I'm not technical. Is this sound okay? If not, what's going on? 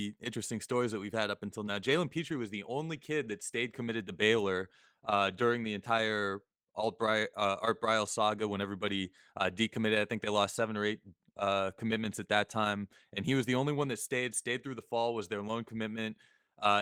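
Yes, nothing stood out as a problem when listening to this recording.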